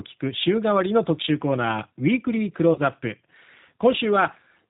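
Throughout the speech there is a slightly rough, synthetic quality, with nothing above 4 kHz. This is plainly audible damage from the G.729 codec, and the sound points to its lighter G.729A variant running at around 8 kbit/s. The codec does not carry the waveform itself. It rebuilds each 10 ms frame from a vocal tract filter, a pitch predictor and a handful of pulses, and that coarse rebuild gives the speech its artificial edge.

From 2.73 s to 2.81 s the speech briefly smears into a stretched sound that weakens, and it stays weak or distorted for a moment after normal sound returns. This is VoIP packet loss concealed by the speech codec. About 30 ms of audio went missing, which fits a single lost packet. The decoder filled the gap by extending its last pitch and filter settings at falling gain. Because every frame builds on the previous one, the error carried on until about 2.81 s.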